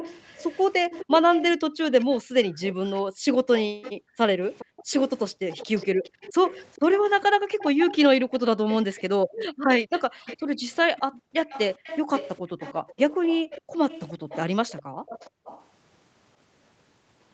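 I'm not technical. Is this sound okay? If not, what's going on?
No. From the start to about 15.6 s there is an echo leak. A faint copy of the speech returns about 0.4 s later, likely from a speakerphone whose echo canceller missed some sound.

There is also background gated by the echo canceller. The room sound briefly drops out during 1.69–6.21 s, 7.27–8.3 s, 9.24–11.35 s, 12.45–12.55 s and 13.61–15.44 s.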